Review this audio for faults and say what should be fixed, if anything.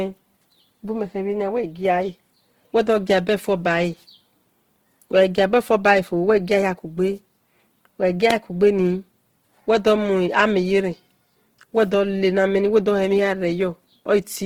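Opus compression, likely from a bitrate near 16 kbps, roughens the speech throughout: starved bands get noise-filled, so it sounds grainy rather than swirly like MP3. To prevent it, encode the speech at a higher Opus bitrate or deliver an uncompressed master.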